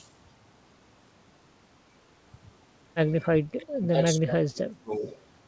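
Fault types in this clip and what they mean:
Speech suppressed in double talk: the speech sinks by about 25 dB at 3.52–3.96 s and about 30 dB at 4.19–5.06 s, likely an echo canceller ducking the talker during overlapping far-end speech.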